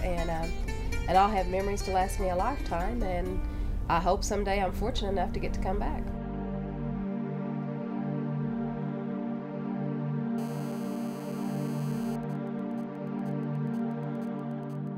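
From 10.38 to 12.16 s there's GSM phone buzz, a harsh, raspy 217 Hz drone about 20 dB under the audio, where a nearby handset's call transmissions got rectified by the audio circuit. Then from 12.23 to 14.88 s come GSM signalling bursts, quieter even ticks with a longer buzz twice a second as the phone idles through a silent stretch of the call.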